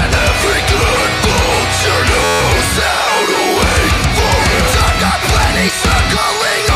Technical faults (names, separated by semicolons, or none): system hang loop